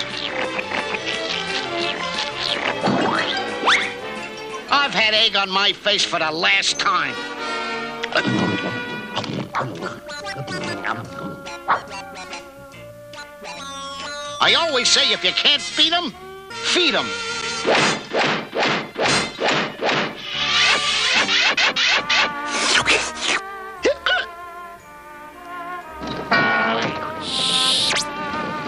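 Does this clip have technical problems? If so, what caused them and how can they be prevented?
No, there's nothing technically wrong to hear here, so there's nothing to trace back or guard against this time.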